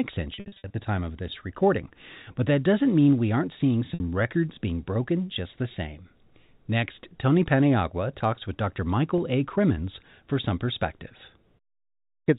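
Telephone-band speech, bandlimited below 4 kHz by G.711 coding, shows packet loss with pitch repetition: scattered gaps from 0.34 to 0.74 s before "the time of this" (about 260 ms lost, runs up to 60 ms), 3.94–4.00 s between "mean we aren't seeing" and "records being broken just", and 9.18 s. Short gaps are bridged with a briefly held, buzzy repeated pitch period, while longer runs fade into silence before the speech returns.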